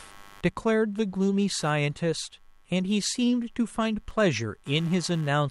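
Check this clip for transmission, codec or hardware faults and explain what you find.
One hardware fault runs through the whole clip: computer activity noise under the speech from start to finish. Load changes in the processor, graphics card or mouse disturb the ground shared with the audio circuit, and that disturbance leaks into the signal as a buzzy, chirping texture. It pulses around 100 times a second and sits roughly 30 dB below the speech. On a spectrogram it appears as evenly spaced vertical striations persisting through gaps. The waveform shows a low, rippling floor between utterances.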